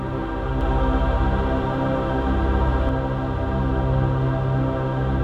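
From 0.61 s to 2.89 s the sound is heard twice: a second copy trails the first by roughly 150 ms, at about the same level, so every onset gets a hard, slapback-like repeat with no reverberant tail or room colour. The copy cuts in and out abruptly at those times. This is a doubled audio track, likely from the signal being captured again through a slower path and mixed back in out of step.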